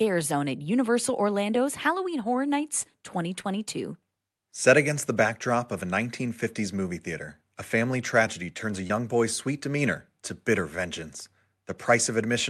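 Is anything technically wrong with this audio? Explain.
Yes. There is short concealed packet loss at 3.41–3.45 s and 8.87–8.91 s. About 20 ms of speech went missing each time. The receiver extended the preceding sound and blended back, leaving a brief smear or wobble.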